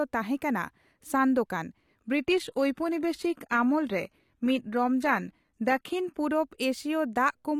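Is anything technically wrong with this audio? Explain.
Yes. From 2.18 s to 6.18 s the speech comes through an adaptive stream at a lower bitrate. The player seems to have switched down while the connection slowed, which fits a jump from roughly 96 kbit/s AAC to a 20 kbit/s HE-AAC version and back. Codec artefacts rise. A spectrogram shows an abrupt shelf with nothing above 14.9 kHz over those four seconds, while the waveform shows no gap at either switch.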